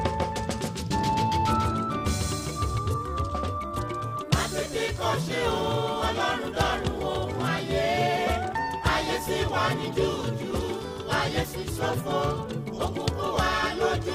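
From the start of the clip until 2.78 s, a doubled audio track is present: a second full-band copy trails the original by roughly 150 ms, about 5 dB quieter, with no decay or room colour. It likely comes from a slower second capture path, and it cuts off abruptly.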